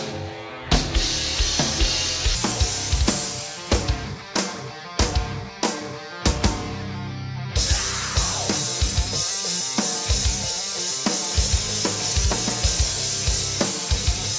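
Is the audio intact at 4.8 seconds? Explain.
Yes, at 4.8 s the audio is intact, with no dropout, click, distortion or other fault audible at that moment.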